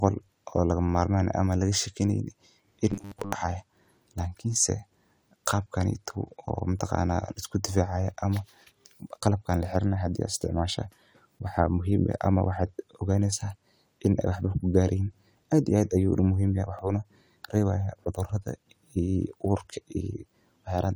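From 2.91 to 3.33 s, the speech turns into a rigid metallic buzz at 100 Hz. This is robotic sound from repeated short buffers. A 10 ms stretch likely repeats while new audio arrives too slowly. Most of the real audio in that span is skipped.

At 6.79 s and again at 16.79 s, a tiny skip breaks the speech. This is overlap between stream segments, each 2 s long. Their time stamps overlap, so 12 ms and then 18 ms are cut away and the waveform jumps.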